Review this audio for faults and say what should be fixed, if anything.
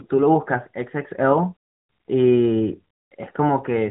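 No faults found; nothing here needs fixing.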